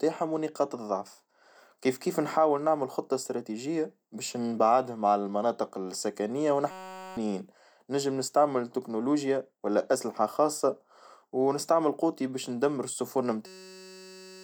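A system hang loop hits at 6.71 to 7.17 s and again from 13.46 s to the end: a frozen 5.33 ms buffer, likely 256 samples, repeats as a steady 188 Hz buzz.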